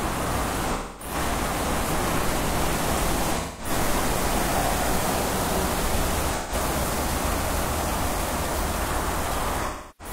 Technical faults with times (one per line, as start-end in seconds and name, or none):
0.73-1.14 AAC frame loss with concealment
3.38-3.70 AAC frame loss with concealment
6.36-6.53 AAC frame loss with concealment
9.65-10.12 AAC frame loss with concealment